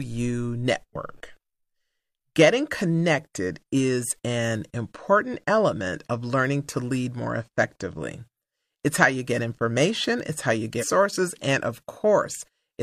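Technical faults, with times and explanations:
10.78–10.85 s, damaged data in a compressed stream: after "information it's how you", corrupted frames threw the decoder out of sync while it hunted for the next valid header, producing a brief glitch.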